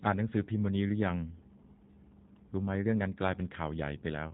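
Speech runs through a G.729 codec from start to finish; the damage fits the 8 kbit/s G.729A variant. Rebuilding the speech from a vocal tract filter, pitch predictor and sparse pulses leaves it plainly rough and synthetic, with nothing above 4 kHz.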